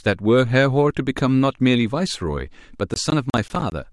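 From 2.94 to 3.72 s, the speech is broken by processor overload crackle. The system cannot finish its short audio buffers in time, and deadlines slip one after another. Each missed buffer drops out as a brief silent gap with hard edges. The gaps sound about 20 ms long, which points to buffers of roughly that size. Around ten of them cluster together. The result is a gritty tearing over the speech that stops once the load eases.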